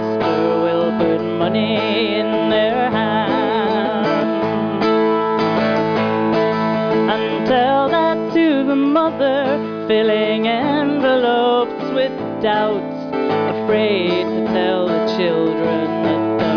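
No technical faults are audible.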